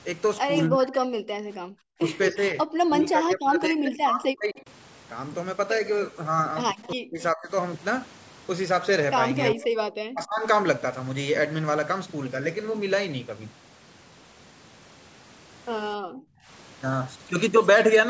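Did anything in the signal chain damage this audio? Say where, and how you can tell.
Yes. The damage is at the call-processing stage. Speech suppressed in double talk shows at 0.69–1.15 s, 1.89–4.65 s, 6.94–7.52 s and 9.54–10.45 s, where the voice dips or breaks up by up to around 40 dB. The likely cause is the echo canceller confusing the local talker with loudspeaker echo and attenuating both.

Background gated by the echo canceller appears at 1.43–1.61 s and 15.97–16.47 s. The room tone drops by about 40 dB and then returns. This is the canceller clamping the microphone hard while far-end audio played from the loudspeaker, then releasing it.

An echo leak is audible at 6.83–7.23 s and 9.41–9.54 s as a copy of the voice delayed by 261 ms, faint in the first instance and noticeably stronger in the second. This is likely residual loudspeaker pickup that the echo canceller failed to remove and sent back.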